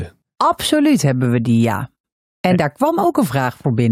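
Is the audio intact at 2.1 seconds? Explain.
No, 2.1 s falls right inside a stretch of frames out of order, running from about 1.95 to 2.12 s, just after "hebben we die ja". Two neighbouring blocks of roughly 85 ms each, which fits four frames per block, got swapped, so that bit plays back half-for-half reversed. You hear it as a garbled little flutter. Overall timing doesn't change.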